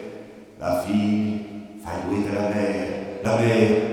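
At 0.84, 2.25 and 3.25 s there's a jump forward in the sound, each skipping roughly 20 ms with no gap. That's likely a dropped buffer (overrun), where the hardware overwrote a block before it was read and the edges got spliced together.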